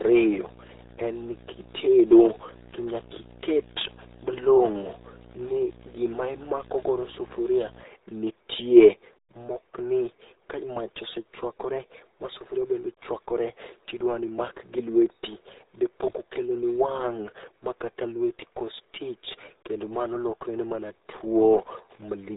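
RealAudio 14.4 codec damage runs throughout this speech: nothing passes above 3.8 kHz, and the heavy gargly muffling fits an 8 kbit/s dial-up-era coder.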